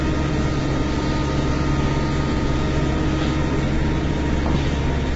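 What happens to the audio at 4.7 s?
At 4.7 s the sound is rough and grainy, as it is for the whole clip. Nothing is left above about 7.7 kHz. This is low-delay AAC compression, likely AAC-ELD, with its short frames starved of bits at a rate that fits about 16 kbps.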